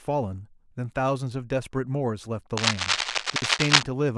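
From 2.57 to 3.84 s there's cable scratch noise, a dense, uneven scratchy rustle sitting a bit above the speech itself. It sounds like a worn lead or connector being handled, with the contact resistance jumping around rapidly, which is the likely cause here.

Inside that stretch, between 3.30 and 3.42 s, you get chunks out of order. A 60 ms piece of audio turns up one chunk late and plays after the piece that should follow it. Nothing's missing, but the reordering leaves hard joins, so that moment sounds jumbled.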